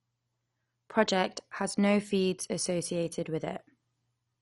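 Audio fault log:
Throughout: MP2 compression, likely the cause of the dull, gurgly character across the whole speech. Nothing comes through above about 11.3 kHz, so the top end is simply gone, and what's left has a grainy, watery roughness. That's what you get when Layer II runs short of bits: upper sub-bands get switched off and flicker, and the remaining bands are quantised coarsely. The damage is plainly audible and points to a low rate, roughly 48 kbps.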